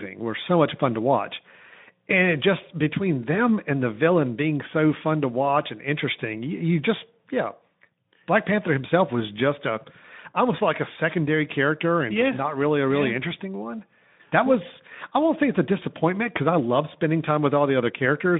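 Nothing stood out on listening to this speech clip.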